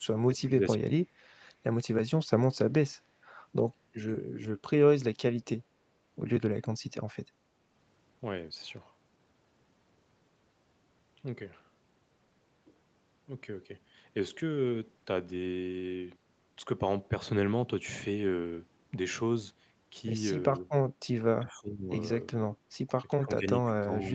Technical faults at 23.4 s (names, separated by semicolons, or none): speech suppressed in double talk